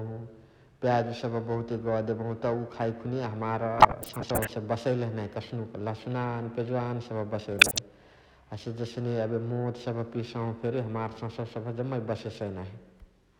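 Periodic clock jitter runs throughout: the converter clock wobbles at around 1 kHz, adding sidebands to the speech that give a rough, metallic edge, gone in pauses.

DAB burbling occurs from 3.78 to 4.50 s and from 7.52 to 7.79 s. Bit errors slip past error correction, putting short blips of noise in single sub-bands.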